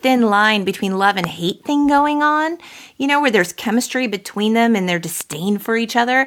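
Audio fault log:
1.24–1.26 s and 5.21–5.35 s, loud pop: one sharp pop after "line between love and", then a double pop after "between them and their". Both rise well above the speech, which carries on underneath. The likely cause is a voltage pulse, such as a plug, switch or static discharge. They show as tall, narrow waveform spikes and thin full-height vertical lines on a spectrogram.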